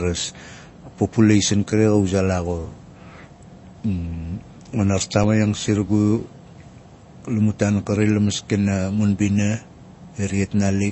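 Throughout, the speech has nothing above 8 kHz and plainly audible watery, swirly artefacts. This is likely MP3 compression at a low bitrate, around 32 kbps. At 5.24 s, a block of digital silence lasting 5.8 ms, which fits a 256-sample buffer, cuts the audio abruptly. It is too short to hear as a gap, so it comes across as a tick or dip.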